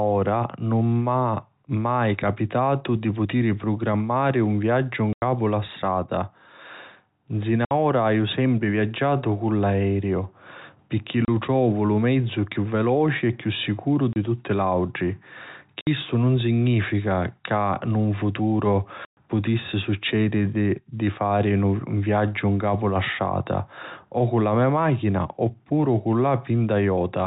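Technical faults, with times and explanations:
5.13–5.22, 7.65–7.71, 11.25–11.28, 14.13–14.16, 15.81–15.87 and 19.05–19.17 s: packet loss filled with silence. The sound drops to dead silence for 90, 60, 30, 30, 60 and 120 ms. The gap after "putiri prugrammari un viaggiu" comes before "la strata", and another follows "e chiù sicuru". Every gap is a multiple of 30 ms, which fits 30 ms packets. The hard edges and silence distinguish this from concealment or a fade-out.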